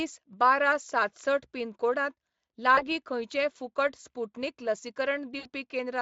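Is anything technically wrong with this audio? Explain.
Yes. Speech is broken twice by VoIP packet loss concealed by the speech codec, carried over a lightly compressed Speex stream. At 2.75 to 2.84 s, just before "खंयचेंय फुकट स्पुटनिक", a short gap fits one lost 20 ms frame. At 5.39 to 5.49 s, about 60 ms is missing, fitting three frames. The decoder extends its last pitch and filter with falling gain. Each dropout sounds like a brief buzzy tone or coloured noise that fades, then weak or distorted speech before it recovers.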